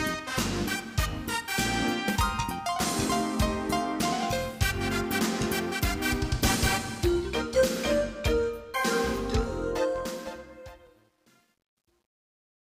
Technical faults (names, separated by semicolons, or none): truncation distortion on a fade